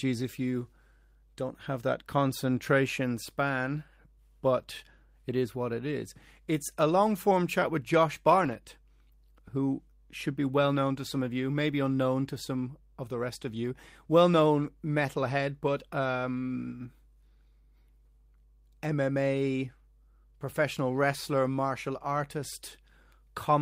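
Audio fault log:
8.41–8.55 s, lost packet rebuilt from error correction: the speech runs on without a gap but turns briefly rougher and noisier, which fits about four lost packets (roughly 80 ms of audio) being filled from the low-bitrate backup copies carried inside the following packets.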